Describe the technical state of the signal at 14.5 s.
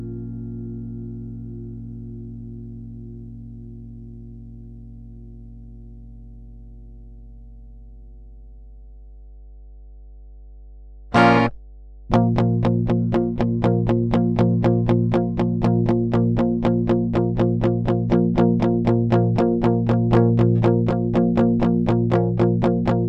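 Mains hum runs under the sound at 14.5 s, as it does through the whole recording. Power-line current is leaking into the signal path, most plausibly through a ground loop or from a transformer close to the equipment, and it sits as a steady low tone at 50 Hz with a few low harmonics above it. The hum sits roughly 20 dB below the wanted sound.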